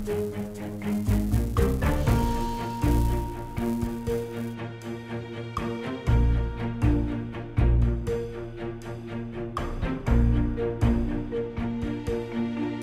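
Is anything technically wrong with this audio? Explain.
Yes. From the start to about 4.55 s there is a filter restarted on every block. The filter loses its memory at each block boundary and starts again from silence. Each restart leaves a small transient. These repeat at 375 Hz, which fits a 128-sample block. The result is a buzz that rises and falls with the level of the sound.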